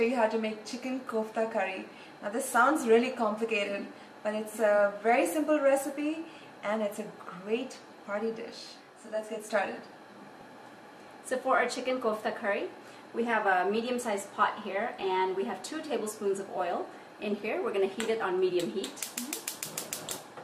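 From 8.50 to 9.50 s, channel delay causes comb filtering: one channel lags by around 20 ms, so the mono sum sounds rough or slightly doubled, with evenly spaced horizontal notch stripes from near 20 Hz upward on a spectrogram.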